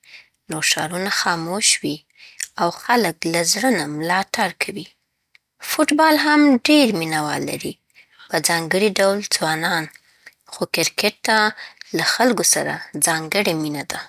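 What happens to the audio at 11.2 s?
Nothing goes wrong at 11.2 s; the speech carries on intact through that moment.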